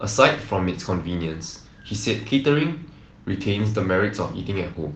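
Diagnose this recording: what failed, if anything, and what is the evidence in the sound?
Nothing has failed here; the speech has been through Opus voice compression in its hybrid fullband mode at 20 kbps, and what you hear is only the light touch that setting leaves.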